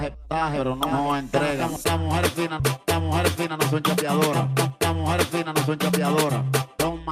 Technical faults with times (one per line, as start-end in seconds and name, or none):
3.45-4.75 jitter buffer speed-up
5.48-6.63 jitter buffer speed-up